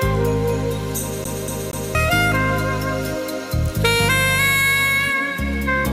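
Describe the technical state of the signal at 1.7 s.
At 1.7 s the audio sits inside a CD stuck on one turn, running from 1.24 to 1.95 s. A scratch keeps knocking the laser back a track, so the same 0.24 s slice repeats three times, each jump marked by a brief mute. That regular gap separates it from a seamless buffer loop.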